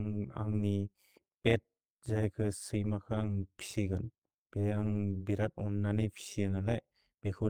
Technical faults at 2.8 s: overlap-add ripple

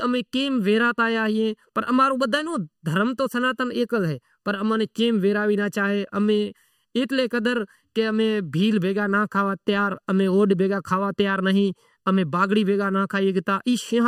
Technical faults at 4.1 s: channel delay (comb filtering)

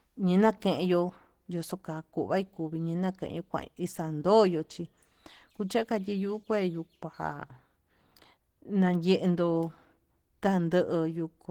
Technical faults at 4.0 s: Opus compression

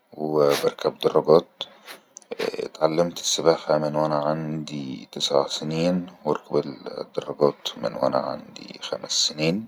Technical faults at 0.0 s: none

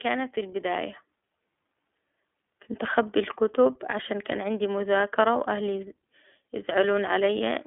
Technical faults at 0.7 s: iLBC codec

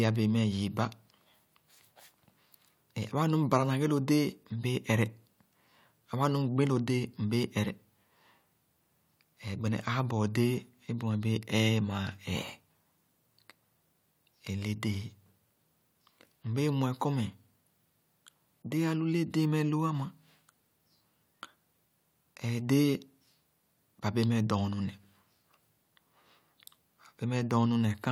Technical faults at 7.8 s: none

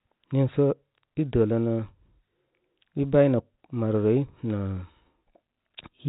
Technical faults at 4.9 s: none

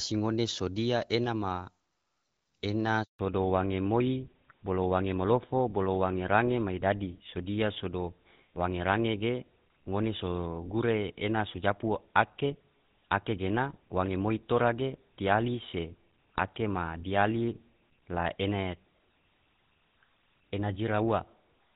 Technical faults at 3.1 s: handover gap; fallback to narrowband

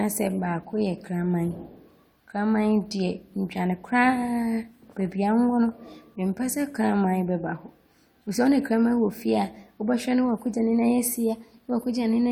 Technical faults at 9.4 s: none

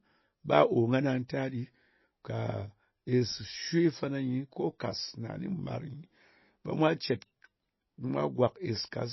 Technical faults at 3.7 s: MP3 compression

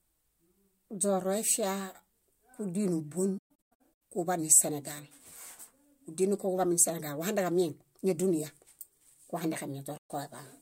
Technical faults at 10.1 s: AAC frame loss with muting

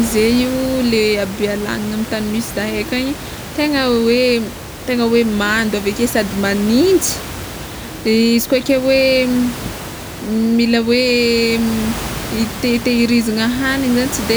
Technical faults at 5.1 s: none

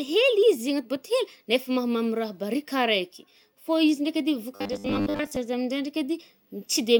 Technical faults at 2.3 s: none

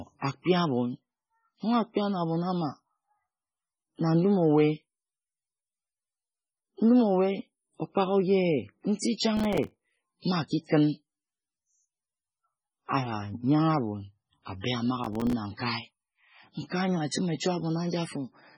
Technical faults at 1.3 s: MP3 compression

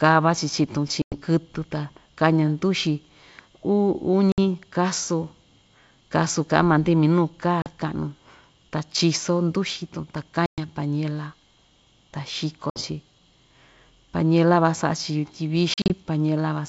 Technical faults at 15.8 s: packet loss on an ADPCM call

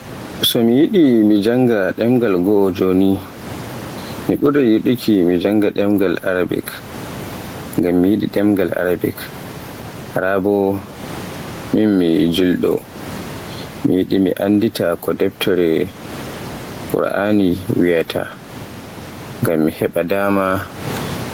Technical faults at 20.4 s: gain pumping

